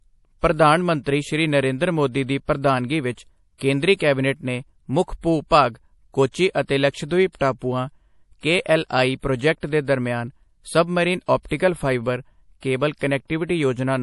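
From start to finish the speech carries MP3 compression damage, plainly audible. Nothing sounds above 11.5 kHz, and a swirly, watery texture suggests a low bitrate, likely near 48 kbps.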